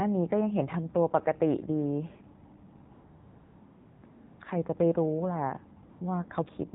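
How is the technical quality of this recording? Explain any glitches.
Quality is held back by a mobile phone path, and a few gaps get filled in artificially.

Throughout, you can hear the AMR narrowband mobile codec. Everything above 4 kHz is gone, and the voice comes across buzzy and synthetic. The codec rebuilds speech from a vocal-tract model driven by sparse pulses, and the damage is obvious enough to fit a low mode of around 7.4 kbps.

AMR comfort noise takes over from 2.94 to 4.04 s, again from 4.06 to 4.40 s, and briefly from 5.90 to 6.00 s. The sender decided nobody was talking and stopped sending speech frames, so the receiver filled the gaps with smooth, steady synthetic noise. That noise switches in and out abruptly, and it can clip quiet word endings.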